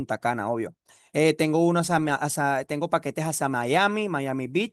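Nothing in this bit of speech stands out as a technical fault; it runs along without any glitch worth pointing to.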